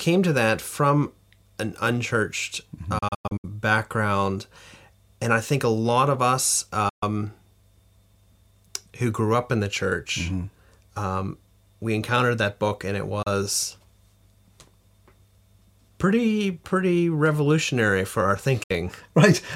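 At 2.98 s the speech breaks into several short holes until 3.45 s, with about 256 ms missing in all. This is a digital broadcast dropout. The receiver muted on failed frames, fading out and back in over 8 ms. The gap lengths point to 32 ms frames. More cuts follow. There are 128 ms at 6.89 s after "a lot of us", 32 ms at 13.22 s after "that book and it", and 64 ms at 18.63 s after "pretty revolutionary for our". The missing audio is gone.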